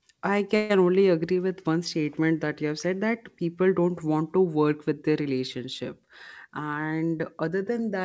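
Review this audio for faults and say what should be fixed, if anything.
Call audio freeze, 0.56 to 0.72 s: about 136 ms of held sound fades like a buzz, likely from delayed packets emptying the jitter buffer. It appears as smeared, frozen harmonics on a spectrogram. A more stable network path or a deeper jitter buffer would prevent it.

Jitter buffer speed-up, 6.45 to 7.71 s, after "work with their relationship": the speech runs at 112% with unchanged pitch as pitch periods are cut, removing about 150 ms. The waveform shows tighter, compressed syllables. Draining the buffer more gradually would prevent it.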